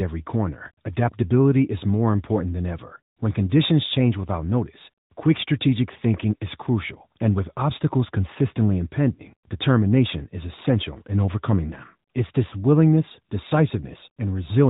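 From start to finish the speech has passed through the AMR narrowband mobile codec, at a rate that fits a mid-level mode of about 10.2 kbps. The codec samples at 8 kHz and rebuilds the voice from a vocal tract model fed by a few pulses per subframe, so nothing above 4 kHz survives. The damage is plainly audible: a boxed-in, telephone-band voice with a buzzy, synthetic edge.

Lost AMR speech frames follow. From 9.14 to 9.21 s, radio errors corrupted the frames so they failed their checksum. The decoder filled the gap of about 40 ms, which points to two lost frames, by repeating the last good pitch and vocal tract settings at falling gain. The result is a short smeared dip where the voice briefly drags and sags. At 12.50 to 12.54 s a gap of about 20 ms, consistent with a single lost frame, gets the same concealment and gives a quicker momentary warble.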